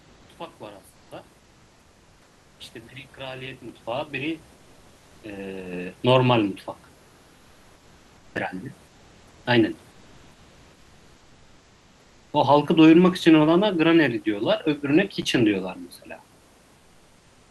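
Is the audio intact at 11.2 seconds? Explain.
No. From 9.91 to 12.33 s the room background is replaced by comfort noise, a steady, featureless hiss about 1 dB quieter, likely from discontinuous transmission pausing the sender. Unlike a dropout or gate, the background never goes silent; it just loses its natural texture.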